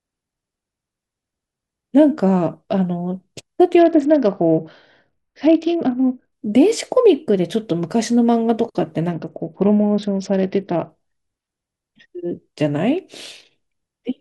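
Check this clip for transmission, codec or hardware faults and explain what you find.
Two Bluetooth SBC bit pool drops, 3.79 to 6.32 s and 9.13 to 10.90 s. Speech turns dull and gritty, likely from the bit pool falling from 31 to 8, near 66 kbps.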